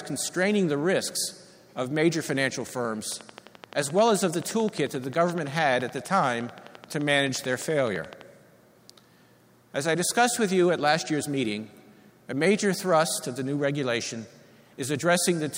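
From 3.12 to 8.22 s, a train of clicks ticks over the sound. About 70 similar pulses arrive at a regular 11.6 per second, peaking roughly 5 dB above the sound. Interference, a faulty connection or a power supply is the likely source.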